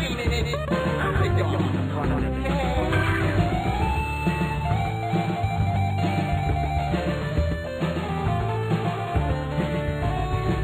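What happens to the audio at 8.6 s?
At 8.6 s the sound carries a doubled audio track, present across the whole clip: a full-band copy trails about 150 ms behind, a few dB quieter, likely from a second, slower capture path. Unlike an echo or reverb, the repeat is a single dry copy with no decay or room colour.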